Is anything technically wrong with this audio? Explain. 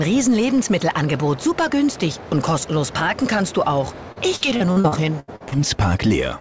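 Yes. From 4.12 to 5.55 s there is repeated packet loss, giving a robotic sound. Audio packets kept arriving late or not at all, and each hole was patched by extending the last sound. There were nine gaps, the longest 80 ms, and about 0.4 s of the stretch, roughly 28 percent, is concealment rather than real sound. The result is choppy audio with pieces missing, heard over a band that stops at 8 kHz, as expected from a wideband call codec.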